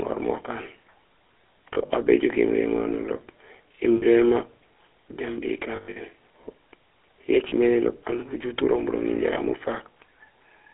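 Across the whole recording the speech runs through the GSM full-rate codec, with a plainly audible buzzy, gravelly roughness from its pulse-driven vocal-tract model, which fits a 13 kbps stream. A spectrogram shows a band of roughly 300 Hz to 3.4 kHz, empty above, with coarse, smeared harmonics.

Lost GSM frames break in at 1.74 to 1.90 s (80 ms missing in short gaps, the longest around 40 ms), 3.96 to 4.04 s, 5.76 to 5.97 s (the longest run about a tenth of a second), 7.48 to 7.54 s and 9.34 to 9.37 s. Each gap is filled by repeating the last good frame, giving a rough metallic ring. On the waveform these are short stretches of repeated waveform, and the spectrogram shows frozen, repeated spectral stripes.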